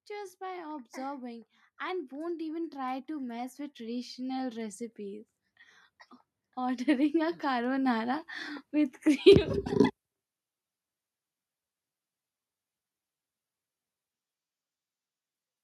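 Speech clip with automatic gain rising twice: voice and background swell together from 0.07 to 5.28 s, by about 10 dB, and from 6.42 to 9.57 s, by about 6 dB.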